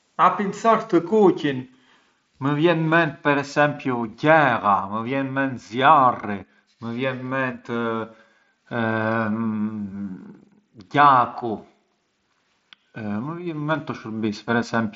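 Nothing in this speech clip stood out as a fault on listening.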